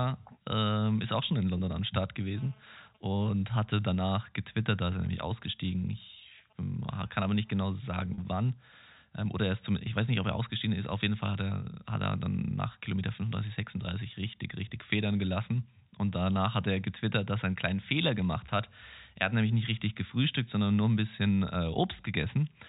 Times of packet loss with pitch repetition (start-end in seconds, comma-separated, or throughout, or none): 1.58-1.60, 8.14-8.18, 18.46-18.48